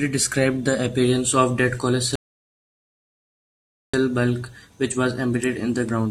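At 2.16 s the speech stops dead and falls silent. This is a rebuffering stall. The player used up its downloaded audio and waited for more. Playback picks up at 3.94 s, exactly where it left off. No speech is lost, but about 1.78 s of silence is added.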